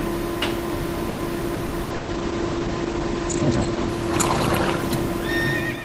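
Repeated packet loss (robotic sound) runs from 1.09 to 2.11 s. Five gaps open in quick succession, the longest 120 ms. Each is patched by stretching the preceding sound, so about 38% of that stretch is concealed, leaving it choppy, with pieces missing.

A call bitrate drop begins at 1.89 s and lasts to the end. The encoder was forced to code far more coarsely, which fits a fall from about 32 to 11 kbps. Bandwidth shrinks from 20 kHz to 8 kHz, so the audio turns muffled and rough, worst for about 1.3 s, and stays that way through the smooth fade-out near 5.5 s.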